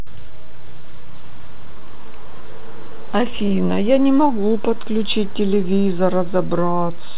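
Right from the start there's a DC offset: the whole waveform sits shifted off zero, which you won't hear but which eats headroom and leaves steady energy at the very bottom of the spectrum. There's also clock drift between sender and receiver running the whole clip, with the sender's clock about 2% slow, so the receiver's jitter buffer keeps draining. That shows up from 0.31 to 7.16 s as repeated timing corrections: the receiver keeps repeating short pieces to keep up, so playback runs at about 98% speed and gains something like 150 ms overall, heard, if at all, as small, unevenly spaced hiccups and a slightly dragging, unsteady tempo. All of this comes through a call path with nothing above 4 kHz, which fits G.711.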